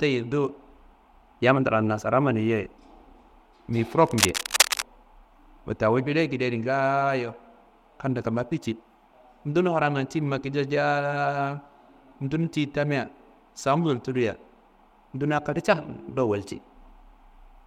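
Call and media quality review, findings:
Dense uneven scratching over the speech, 4.05–4.84 s, roughly as loud as the speech: cable scratch noise, likely a worn cable or connector moving, its contact resistance fluctuating.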